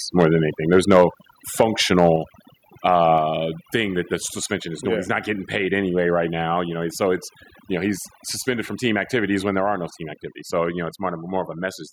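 Overdone noise removal runs through the whole speech clip. The noise reducer was set too aggressively, so it suppresses individual frequency bands along with the quieter parts of the speech. The background drops and breaks up into twinkling specks.

Microphone overload is heard at 0.18–0.25 s, 0.73–1.04 s, 1.60–1.63 s and 1.98–2.10 s. The cause is likely an input gain set too high, pushing peaks about 3 dB past the converter's limit, and about 6 dB in the second event. A small share of samples gets its tops flattened, giving those peaks a harsh, crackling edge.

The microphone volume is stepped down at 1.02 s by about 3 dB, at 2.16 s by about 4 dB, and at 3.18 s by about 3 dB. The likely cause is the call software reacting to the clipping by cutting the device's input gain. Each step drops speech and background together, and the first two fall right at or just after a distorted stretch.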